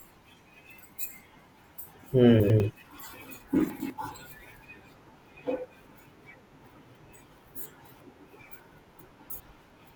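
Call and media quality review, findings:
Chunks out of order in speech at 2.4–2.6 s and 3.7–3.9 s: a 100 ms chunk plays one chunk late, so the two segments swap and produce a brief garble. At 9.0–9.4 s, a chunk lands three chunks late, giving a longer jumbled stretch. Probable component is the jitter buffer or write queue, which lets a late chunk through instead of reordering it. Nothing is dropped. Waveform shows three hard joins per event, and the spectrogram shows formant tracks broken and restarting.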